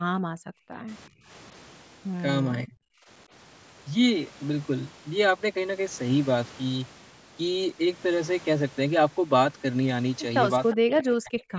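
From 0.19 to 0.72 s, and again from 1.09 to 1.29 s, the room tone behind the speech is gated by the echo canceller. While the far-end loudspeaker plays, the canceller clamps the microphone, so the background falls away and then snaps back. The first dip reaches about 40 dB, the second about 21 dB. On a waveform the noise floor pinches to near-flat for those spans. A spectrogram shows the low-level haze below the 8 kHz ceiling of the call path vanishing in vertical blocks.

At 2.66 to 2.85 s the speech itself dips deeply for a fraction of a second. From 10.73 s to the end of the clip it dips deeply across most of that final stretch. This is likely speech suppressed in double talk: both ends were active, and the canceller could not tell the near talker from the echo, so it attenuated everything. In the waveform the speech envelope collapses abruptly. A spectrogram shows harmonics and upper formant energy cut off in sharp-edged gaps.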